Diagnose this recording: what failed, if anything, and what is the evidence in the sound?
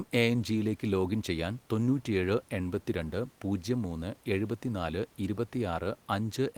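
Nothing failed; faint room noise sits about 33 dB down.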